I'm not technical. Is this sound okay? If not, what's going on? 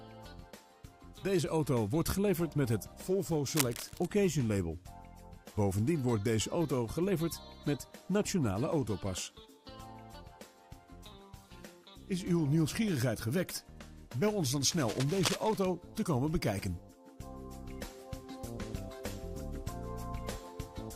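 No. A worn cable or connector was likely jostled, causing cable scratch noise: scratchy rustling over the sound at 3.49–4.06 s and 14.70–15.66 s.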